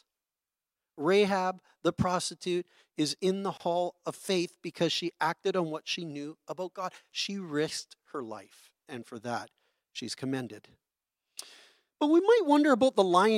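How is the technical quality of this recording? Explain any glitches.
The recording has one glitch, a gap at a join of encoded pieces, from 3.57 to 3.60 s, between "prostitute is in the" and "of faith because she". The audio was encoded as separate segments, apparently about 10 s long, and joined without removing the encoder's leading silence and end padding. The result is a 27 ms dropout with smeared edges, after which the speech resumes exactly where it stopped.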